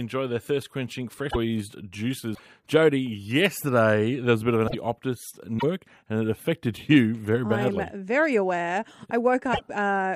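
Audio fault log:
1.29–1.36 s, 2.34–2.40 s, 4.66–4.75 s, 5.58–5.64 s and 9.52–9.61 s: broken MP3 bit reservoir. The speech jumps ahead. This happens after "their thirst quenching", after "a bit of an", and just before "and it affected". Each disturbance lasts about 56 to 84 ms, which fits two or three 26.1 ms MP3 frames. The likely cause is dropped frames. The frame after each cut reaches back for borrowed data and finds the wrong bytes.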